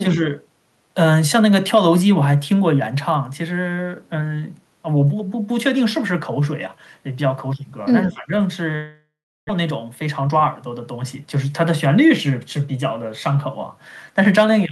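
Speech runs through with three kinds of transmission fault. At 0.03 to 0.19 s the level dips shallowly, about 5 dB over roughly a tenth of a second. At 8.08 to 8.32 s a deeper dip of about 15 dB lasts around a fifth of a second. Both are likely speech suppressed in double talk, where an echo canceller attenuates the near talker while the far side is active. Unlike a network loss, the voice ducks. From 8.75 to 9.51 s the audio gives way to a stretched continuation of the last sound that decays and then falls to about 350 ms of near silence. When sound returns, roughly 600 ms of material is simply gone. That pattern, a fading fill followed by quiet and a jump forward in the content, marks a long network dropout as the likely cause, rather than suppression, which would leave the talker partly audible. Right after, from 9.63 to 11.37 s, the speech runs at about 106 % of normal pace with its pitch unchanged, trimming roughly 100 ms in total. 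This is jitter buffer speed-up, draining the extra delay of roughly 100 ms that built up across the gap. Because pitch holds steady, it sounds hurried rather than chipmunk-like, which distinguishes it from a plain playback-rate error.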